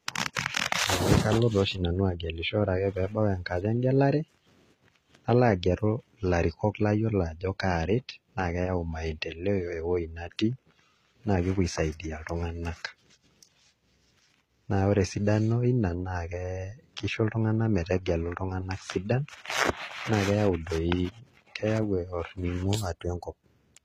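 From start to finish the speech carries plainly audible HE-AAC compression damage, likely from a very low bitrate near 20 kbps. The treble is synthesized from copied lower bands, so sibilants sound gritty and metallic, and nothing remains above 14.9 kHz.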